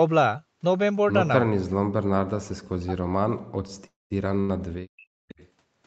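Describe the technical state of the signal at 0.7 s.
At 0.7 s the speech signal is intact, with no dropout, click, distortion or other fault, and the normal processing includes the call path's band limit with nothing above about 8 kHz.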